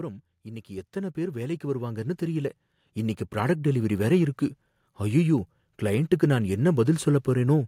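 Automatic gain rising from 0.43 to 3.97 s: the gain control judged the speech too quiet and lifted it about 14 dB, so voice and background swell together.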